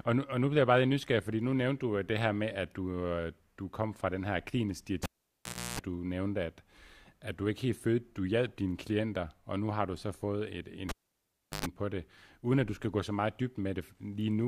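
At 5.03 s and again at 10.89 s, the speech is broken by a cable pulled and plugged in. A pop cuts the signal. Near silence follows for about 0.7 s. Mains buzz then leaks in while only the tip connects: 0.31 s of 60 Hz hum the first time, 0.12 s of 50 Hz hum the second. A second pop brings the speech back at 5.79 s and 11.66 s.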